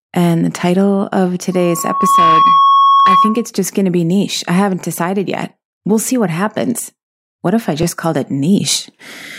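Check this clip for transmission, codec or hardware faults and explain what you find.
Two faults here: a feedback squeal and a repeating chunk-overlap glitch.

Right after "the title of", from 1.52 to 3.49 s, there's loudspeaker feedback squeal. A mic is hearing its own speaker, and the loop gain tops one at 1.1 kHz, so that tone swells over a bit under a second and sits roughly 5 dB above the speech until "just going to be".

Then there are overlapping chunks at 1.79, 4.81 and 7.83 s, every 3 s. Each chunk starts before the previous one finishes, so 20 ms replays at the join, giving a click-stutter, for example between "be niche I haven't" and "decided yet", and between "if I" and "called it".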